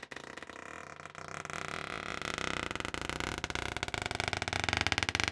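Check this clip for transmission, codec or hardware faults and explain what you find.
No transmission, codec or hardware faults can be heard in this audio. Nothing in it calls for a fault explanation.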